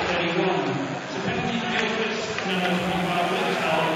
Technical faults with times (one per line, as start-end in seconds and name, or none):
0.00-3.96 DECT cordless phone buzz
0.00-2.50 adaptive stream starting at a low bitrate